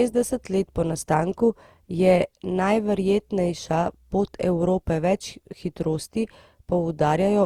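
Generation loss runs through the whole speech recording: the sound is swirly, smeared and hollow, with blurred consonant attacks, likely from repeated lossy re-encoding, about seven passes, which fits an Opus chain near 64 kbit/s, each pass re-quantising on a shifted frame grid and stacking noise.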